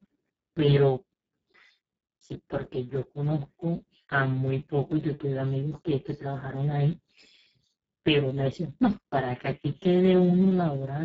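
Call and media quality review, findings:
Speech hoarse and noisy throughout; nothing above 7.7 kHz, upper band only a shaped noise-like hiss. Speex codec at a very low setting, consistent with roughly 6 kbps: too few bits for excitation. Heavy damage.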